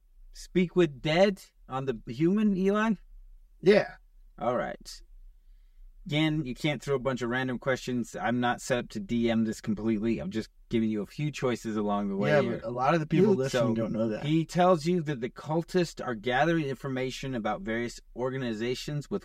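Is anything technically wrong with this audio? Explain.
Yes. Channel delay causes comb filtering throughout the speech. One channel lags by roughly 5 ms, so the mono sum cancels at evenly spaced frequencies from around 100 Hz. The voice sounds hollow and phasey.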